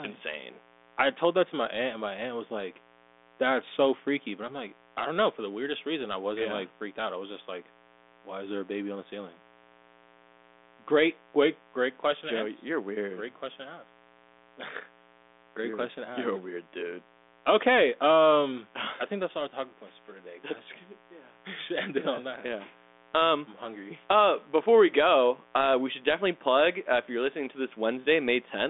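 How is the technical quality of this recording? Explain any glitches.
A mains buzz runs under the whole recording. The telephone path is narrow, passing roughly 250 Hz to 3.6 kHz with nothing above 3.8 kHz, which fits G.726 ADPCM at 40 kbit/s, with faint codec damage at most.

Mains buzz is present from start to finish. Its base is 60 Hz. A dimmer, rectifier or poor shielding injects sharp spikes twice per cycle. That builds a stack of harmonics reaching into the kilohertz range. The result is a steady, raspy buzz. It sits roughly 30 dB below the speech.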